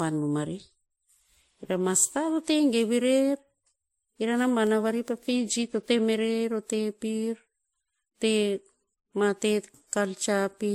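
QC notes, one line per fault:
Throughout, transcoding between lossy codecs: speech with nothing above 16.6 kHz, likely a low-bitrate MP3 encode re-encoded to WMA, stacking both codecs' artefacts.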